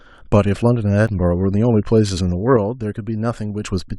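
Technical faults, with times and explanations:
1.08 s, overlap between stream segments: A brief skip lands at the join between two segments. Their timestamps overlapped, so the player discarded about 5 ms of speech that had not actually been duplicated. The waveform jumps straight from the end of one segment into a later point of the next. Only one join falls inside the clip, so the skip occurs once.
2.57 to 3.63 s, sudden gain jump: The speech and the background noise both drop by about 6 dB at 2.57 s, with no fade, and stay at that lower level until 3.63 s. Because the noise floor shifts along with the speech, the change happened in the signal chain rather than at the source. The likely cause is a digital gain setting, or an equivalent bit shift, applied instantly without a ramp, which produces an abrupt step in level.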